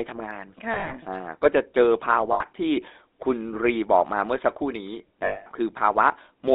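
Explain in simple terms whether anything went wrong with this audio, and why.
The whole clip has gone through the GSM full-rate codec, the old phone-call coder, so the speech sounds buzzy and gravelly, with everything above roughly 3.7 kHz cut off.

There are also lost GSM frames at 0.74 to 0.95 s (a few short dropouts scattered through that stretch), 2.32 to 2.42 s, and 5.24 to 5.47 s. The phone repeated its last good sound instead, giving a metallic ring.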